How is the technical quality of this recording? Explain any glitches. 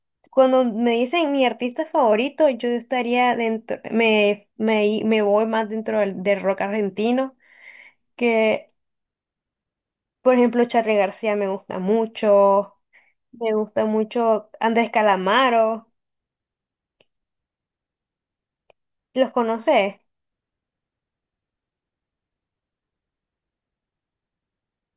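The technical quality of this recording is sound, with no glitches to explain.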